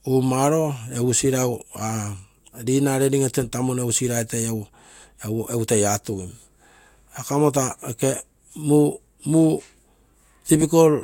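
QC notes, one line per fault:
No faults were heard anywhere in the speech. Nothing in the recording calls for a QC note.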